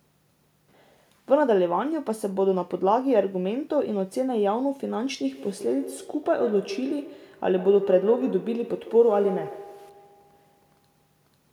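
A speech recording that develops feedback echo between two devices from 5.25 s to the end. Each syllable returns roughly every 150 ms, peaking about 11 dB below the direct speech, as a second device in the same room replays this microphone's signal and the microphone captures it again, beyond the reach of the local echo canceller. On a spectrogram, each harmonic pattern is trailed by fainter, evenly spaced copies. The waveform shows regularly offset ghost envelopes.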